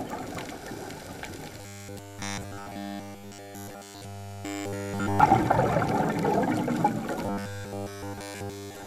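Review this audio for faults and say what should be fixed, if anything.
Robotic sound from repeated short buffers, 1.61 to 5.20 s and 7.26 s to the end: the sound becomes a rigid, metallic 100 Hz buzz, likely from essentially every 10 ms buffer being replayed while new audio arrives too late. Prevent it by giving the audio thread enough priority and buffering headroom.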